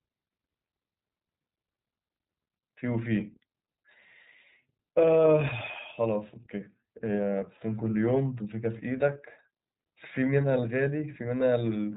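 From start to end, the speech carries iLBC codec damage, and it is plainly audible. The bandwidth stops near 3.8 kHz, so sibilants and breath lose their air. The codec works in short frames, here 30 ms, and codes each frame's excitation on its own. That frame-by-frame coding leaves a rough, slightly synthetic buzz on the voice. The sound points to the 13.33 kbps mode. Clarity holds, but the timbre sounds thin and processed.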